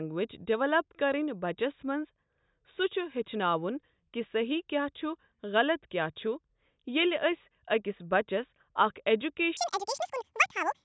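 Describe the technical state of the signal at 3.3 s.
Nothing is wrong with the signal at 3.3 s; the speech there comes through intact, with no dropout, click, clipping or other fault at that point.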